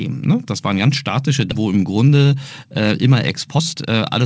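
Skip ahead at 1.52 to 1.62 s: about 0.7 s of speech never plays. Audio that arrived late or overflowed the jitter buffer was discarded while newer packets were already queued, so playback leaps forward to catch up. The two sides are butted together with almost no gap, producing an abrupt jump where a chunk of the utterance simply vanishes rather than a silence or dropout.

Jitter buffer speed-up at 2.08 to 2.35 s and again at 3.15 to 4.20 s: the buffer had built up more audio than its target, so the receiver repeatedly trimmed out short pitch-period-length slices to shrink the delay. The first stretch runs at about 110% speed, shedding roughly 40 ms. The second runs at about 117%, shedding roughly 200 ms, and sounds noticeably rushed while the pitch stays unchanged. Throughout, the call path's band limit is audible as nothing above 8 kHz, which fits a wideband codec such as G.722.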